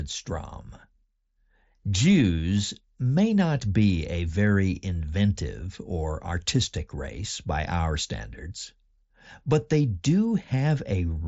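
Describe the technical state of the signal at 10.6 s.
At 10.6 s the speech is intact, with no fault in the signal, and it carries the band limit of the mSBC Bluetooth headset link, with nothing above about 7.7 kHz.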